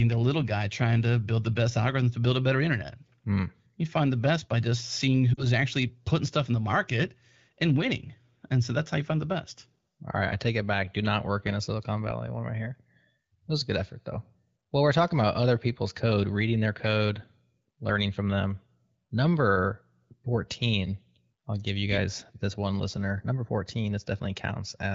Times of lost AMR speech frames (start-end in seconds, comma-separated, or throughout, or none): 5.34-5.44